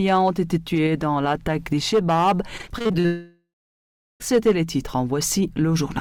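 From 2.57 to 3.06 s, repeated packet loss (robotic sound) sets in. Packets go missing or arrive late in quick succession, the longest hole about 40 ms, and each is patched by stretching the preceding sound. Over a third of that stretch is filled this way, so the audio turns choppy, with pieces missing.

From 3.06 to 4.22 s, a break heard as a long network dropout follows, likely a stall in which nothing reached the receiver for over a second. The last sound is extended into a fading buzz or hiss, then about 0.72 s of silence remains before audio resumes at 4.22 s, with the missing portion never played.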